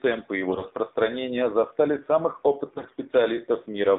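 From start to finish the speech has passed through the AMR narrowband mobile codec. The line is confined to roughly 200 Hz to 3.7 kHz, so sibilants lose their edge and there is no air above the band. Coding damage is plainly audible: the vowels sound buzzy and synthetic, as a low-rate mode does, which fits AMR-NB running at about 7.4 kbps. At that rate, the few pulses per subframe that drive the vocal-tract model cannot capture the fine detail of the voice.

From 0.48 to 0.73 s, and again from 2.66 to 2.97 s, AMR bit errors are heard. Over a weak link the lightly protected bits in each frame arrived flipped, with around one bit in ten wrong, while the checksum on the core bits still passed, so the decoder used the damaged frames. The excitation pulses land in the wrong positions and the fine pitch, gain and spectral values are off. Pitch and level stay roughly intact, but the voice turns hoarse, scratchy and gargly for those stretches. 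The durations suggest about a dozen and about sixteen 20 ms frames hit.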